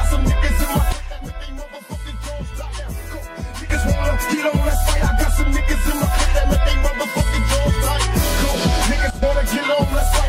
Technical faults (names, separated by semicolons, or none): sudden gain jump